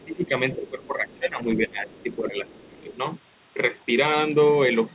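From 0.00 to 0.05 s, a faint second voice sits far below the talker, likely the other side's voice leaking through from a loudspeaker the echo canceller did not fully remove. It returns at 1.13 to 1.19, 1.88 to 2.03 and 2.48 to 2.66 s. The talker's level drops by roughly 10 to 25 dB at 0.05 to 0.31, 0.56 to 1.45, 1.67 to 2.37 and 2.53 to 2.88 s, so the voice dips. This is speech suppressed in double talk: while both sides spoke, the canceller likely could not separate the talker from the echo and turned both down.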